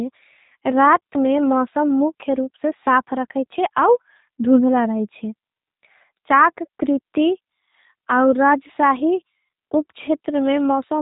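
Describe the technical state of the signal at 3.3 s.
At 3.3 s the speech carries G.729 codec damage, present across the whole clip. Speech is rebuilt from a vocal tract model and sparse pulses, which fits an 8 kbit/s stream, so it sounds rough and synthetic, not merely muffled as a plain low-pass would leave it, and nothing passes above 3.8 kHz.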